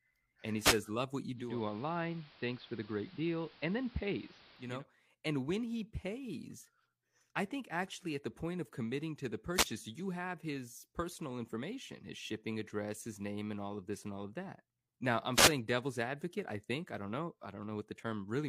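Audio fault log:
0.60–0.80 s, 9.54–9.68 s, 15.33–15.53 s: wireless microphone noise hit. Each is a brief swish of static, 0.14 to 0.21 s long, that rises over the speech and falls away again. The FM radio link from the microphone fades for a moment when reflected copies of the signal cancel at the receiver. With the wanted signal weakened, the receiver's own noise comes up through the audio until the signal recovers.
1.33–4.85 s: digital radio blending to analogue. Over a crossfade of about 0.3 s, the sound turns duller and hiss comes up, sitting about 25 dB below the speech, while the loudness stays the same. At the end it crossfades back. The receiver lost its digital stream and fell back to the station's AM broadcast, and the AM channel's narrower bandwidth cuts the treble.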